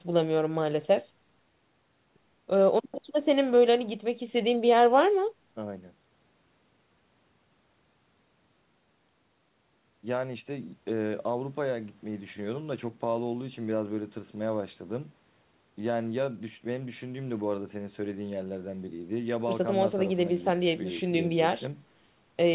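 No technical faults can be heard in this speech. It has passed through a call codec, most likely G.711 mu-law, so there is nothing above about 4 kHz and the top end sounds narrow, as telephone-band audio does.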